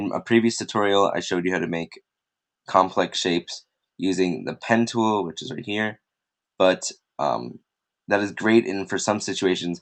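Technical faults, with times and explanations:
No technical faults detected.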